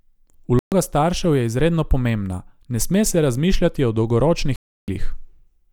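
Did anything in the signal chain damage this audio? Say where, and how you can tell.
Yes. The speech cuts to silence twice: from 0.59 to 0.72 s, just before "staršev je izredno pomembna", and again from 4.56 to 4.88 s. Both gaps are clean holes with no noise or smearing, and speech resumes further along rather than where it stopped. That is a digital broadcast dropout at the reception stage. The receiver lost lock or rejected corrupted frames and muted. The 0.13 s and 0.32 s gaps fit whole frames of about 32 ms each going missing.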